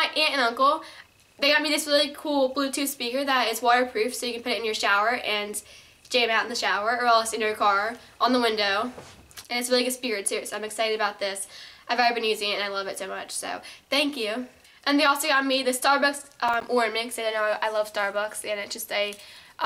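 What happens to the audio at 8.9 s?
Nothing goes wrong at 8.9 s; the audio plays through that moment intact, with no dropout, click, glitch or distortion.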